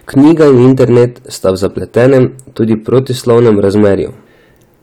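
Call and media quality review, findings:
Hard clipping, throughout the speech. Level driven about 8 dB past a gain or converter stage's ceiling; roughly one sample in twenty cut flat. Flat-topped peaks add high harmonics, heard as harsh fuzz on louder syllables and crackle on peaks.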